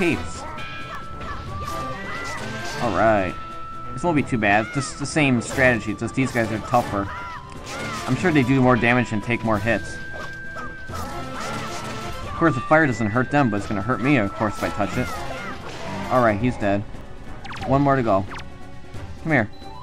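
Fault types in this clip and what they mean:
Dropped buffer (overrun): brief jumps where the sound skips ahead at 0.95, 7.66 and 17.01 s, likely from samples overwritten before being read. Around 10 to 20 ms goes missing each time, with no silence, showing as a sharp waveform step and a thin vertical spectrogram line.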